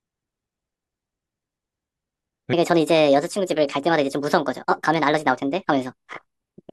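From 2.53 s to the end, the speech plays as a section at the wrong speed, running 1.48 times too fast, likely from playback against a mismatched clock. Pitch leaps about seven semitones and syllables hurry. A spectrogram shows harmonics stepping upward; the waveform's periods tighten.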